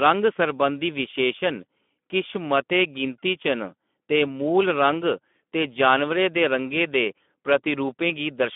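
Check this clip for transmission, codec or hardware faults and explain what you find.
One codec fault runs through the whole speech clip: Speex coding, with plainly audible damage. Speex is a CELP codec that models the voice and spends few bits on the excitation, which fits a rate near 11 kbps. The speech sounds noisy and hoarse. A spectrogram shows energy confined to 200 Hz to 3.5 kHz, with smeared, grainy harmonics.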